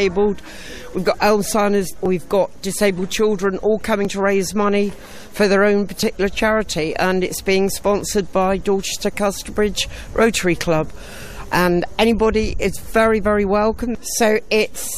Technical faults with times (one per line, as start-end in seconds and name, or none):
2.06 overlap between stream segments
4.05 overlap between stream segments
6.03 overlap between stream segments
8.01 overlap between stream segments
13.96 overlap between stream segments